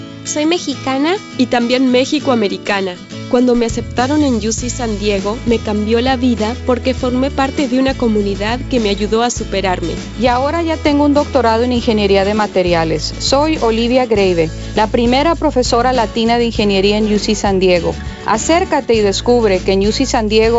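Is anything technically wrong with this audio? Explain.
No, nothing is technically wrong.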